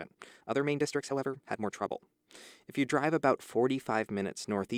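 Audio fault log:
0.00–2.08 s, time-stretched section: the speech runs about 1.43 times faster than the rest while its pitch stays unchanged, giving a rushed delivery that drops abruptly to normal pace at 2.08 s, likely from software shortening this stretch by discarding short segments to fit a length.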